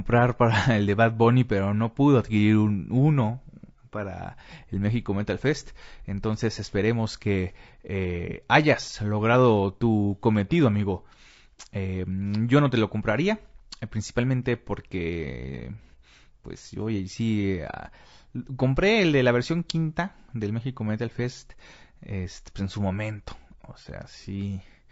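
From start to finish the speech sounds rough and grainy, with a hiss-like noise filling the gaps between the harmonics so that pitched sounds lose their clean, ringing quality. The damage is plainly audible throughout. This points to low-delay AAC compression, likely AAC-ELD as used in video calls, at a rate that fits about 32 kbps. Its short frames cannot separate closely spaced harmonics well, and at this bitrate the leftover bits fall short, leaving quantisation noise between them.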